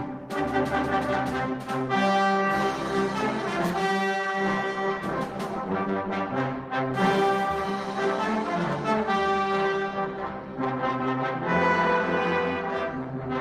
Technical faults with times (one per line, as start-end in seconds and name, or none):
none